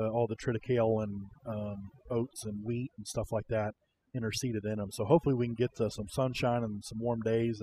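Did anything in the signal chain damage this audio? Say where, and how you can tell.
Yes. Overdone noise removal in the call-processing stage runs throughout this speech: the noise floor drops and breaks up into twinkling specks, and quiet parts of the voice are stripped away with it. A spectrogram would show a blank background with isolated flickering dots, and speech harmonics chopped into patchy fragments.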